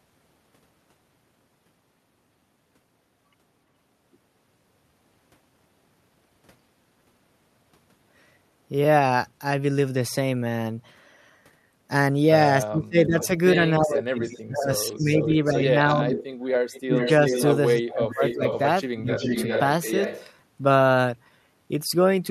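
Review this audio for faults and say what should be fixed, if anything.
Speech suppressed in double talk, from 12.64 to 16.2 s and again from 16.81 to 19.25 s: when both ends spoke at once, the echo canceller likely could not tell the local talker apart from the loudspeaker echo and pulled the whole signal down. The speech dips sharply, by around 25 dB at its deepest, and drops out in pieces, adding up to about two seconds in the first stretch and about one second in the second. A double-talk detector that holds the suppressor back while near-end speech is present, with gentler gain reduction, would prevent this.

Echo leak at 14.22 to 14.42 s, 14.95 to 15.52 s, 16.11 to 17.43 s, 18.09 to 18.59 s and 19.12 to 20.3 s: the far end's echo canceller likely failed to fully cancel what its microphone picked up from its loudspeaker, so a copy of the speech was sent back. It arrives 378 to 396 ms late, with the delay creeping up across the clip. 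The first two scraps sit about 25 dB below the speech, the one at 18.09 s about 10 dB below, and the longer passages at 16.11 and 19.12 s only about 5 dB below. Better loudspeaker-to-microphone isolation, or headphones at that end, plus a canceller that tracks the drifting delay, would prevent it.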